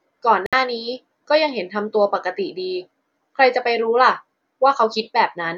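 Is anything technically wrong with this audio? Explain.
Yes, there's a digital broadcast dropout in this speech from 0.46 to 0.53 s. The receiver stopped getting valid frames and muted, so the sound cuts to silence for about 64 ms, which fits a couple of lost frames. Then it picks up later in the programme, with that stretch simply gone.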